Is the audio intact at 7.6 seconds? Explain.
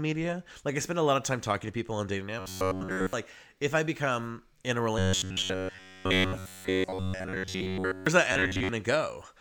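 No, a rigid, metallic buzz near 94 Hz replaces the speech from 4.99 to 8.07 s, after "I become in a". This robotic sound from repeated short buffers likely comes from looping the last 11 ms of audio throughout that span.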